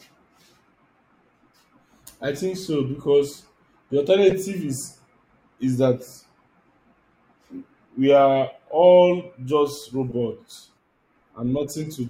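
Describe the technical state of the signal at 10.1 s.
A short chirp-like burst of noise cuts in from 10.09 to 10.13 s, right after "we are all just", peaking at around -20 dBFS. This is a corrupt frame decoded. Flipped bits in the compressed stream went unnoticed, and the decoder rebuilt the damaged data with wrong gains and misread codes. That threw energy into frequencies where it doesn't belong. The roughly 40 ms span points to a few consecutive frames being hit.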